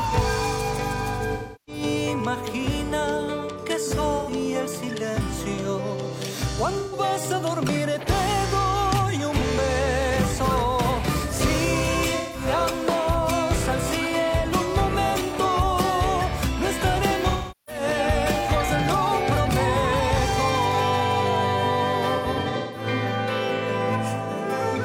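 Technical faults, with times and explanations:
1.33–1.83 s, 4.19–4.30 s, 6.79–6.99 s, 12.17–12.45 s, 17.29–17.82 s and 22.16–22.86 s, AAC frame loss with concealment: blocks of coded audio went missing, and the decoder rebuilt each gap by reusing and scrambling the last good spectrum. The gaps run from 85 ms to 384 ms. The final one is broken into scattered dropouts over about 0.6 s, the longest around 150 ms. The shorter patches sound smeared, noisy or phasey rather than silent.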